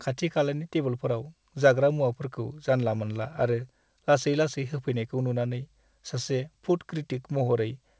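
No technical faults turn up anywhere in this speech recording. It has come through a call path working as intended, and nothing reaches above 8 kHz, which fits a wideband codec such as G.722.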